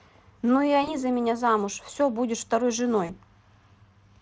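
A speech clip with VoIP packet loss concealed by the speech codec at 0.83–0.95 s and 3.05–3.15 s. Each gap, about 40 ms, fits two lost 20 ms frames. The Speex decoder stretches its last pitch into a fading buzzy tone or coloured noise rather than leaving silence or a click, and the voice stays weak briefly afterwards.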